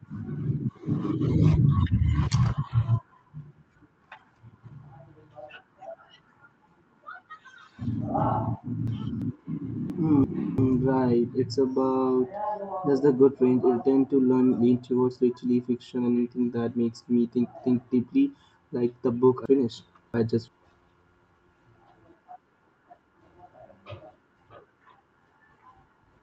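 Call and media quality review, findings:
Chunks out of order: jumbled patches at 7.85–9.22 s, 9.90–10.58 s (before "right it's") and 19.46–20.48 s (after "the book"). Late ~341 ms blocks, likely buffer/writer reordering. Opus call path audible as an 8 kHz top end.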